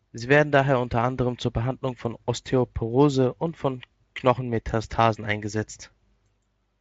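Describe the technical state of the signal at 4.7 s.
At 4.7 s the speech comes through intact, with no audible fault at that moment.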